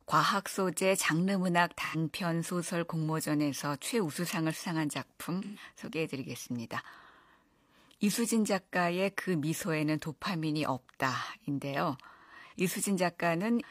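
AAC frame loss with concealment at 1.84–1.96, 5.43–5.63 and 12.47–12.53 s: the decoder patches missing frames from the last good spectrum, leaving smeared, phasey blurs.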